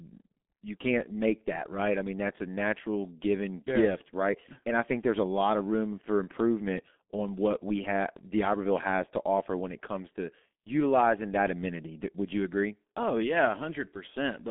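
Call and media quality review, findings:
G.723.1 codec, whole clip: muffled, hoarse speech, smeared consonants, nothing above 3.7 kHz, 200 Hz to 3.5 kHz line band. 30 ms frames at a rate consistent with 6.3 kbit/s.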